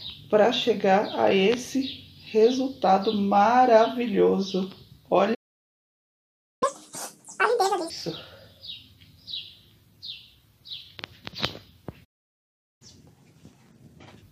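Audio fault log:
5.34–6.63 s, playback stall: the player likely ran short of data or had its thread blocked, so output falls silent for about 1.27 s in mid-flow before the sound resumes.
6.63–7.9 s, catch-up at higher speed: the player resamples its backlog at 2.0 times normal rate to recover lost time, so the sound runs double-fast and roughly ten semitones higher, then drops back to normal.
12.04–12.82 s, playback stall: again the player likely starved for data or was blocked, so the sound cuts to silence for about 0.76 s mid-flow and then carries on.
12.82–14.23 s, catch-up at higher speed: the backlog is resampled at 1.5 times speed to close the gap, so the sound is audibly hurried and about seven semitones sharp until normal speed and pitch return.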